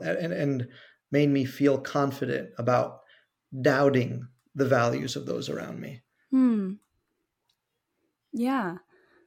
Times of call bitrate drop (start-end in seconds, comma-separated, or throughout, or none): none